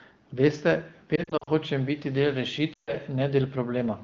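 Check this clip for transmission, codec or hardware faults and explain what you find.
Two stretches of lost AMR speech frames, heard as brief dropouts in wideband speech whose clean, 7 kHz-wide sound fits a higher-rate AMR-WB mode.

From 1.16 to 1.50 s, just before "hočem biti del", the sound flickers with short dips and warbles spread over about 320 ms, none longer than about 40 ms, about 160 ms lost in total. From 2.73 to 2.94 s, right after "hočem biti del", about 140 ms smears, fades quickly and returns weakly. Radio errors corrupted these frames, so the decoder repeated the last good pitch and vocal-tract settings at falling gain, fading faster than narrowband concealment would.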